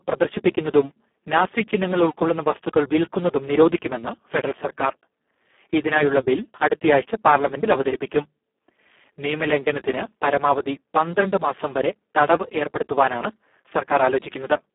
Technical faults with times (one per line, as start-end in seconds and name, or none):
0.00-14.74 Speex codec